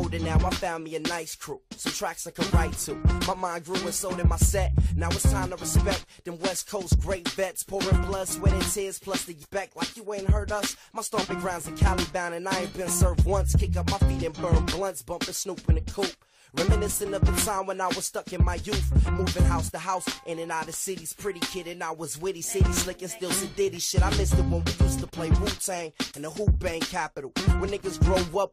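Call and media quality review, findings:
Stream segment skipped at 9.42 s: abrupt jump ahead with a brief blip, audio discontinuous. Waveform shows a hard splice, no crossfade; spectrogram shows a thin broadband vertical line. Likely cause: segmented-stream player losing one segment and resuming at the next.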